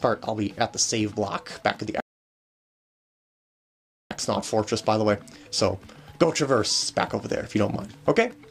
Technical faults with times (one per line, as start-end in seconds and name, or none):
2.00-4.11 rebuffering stall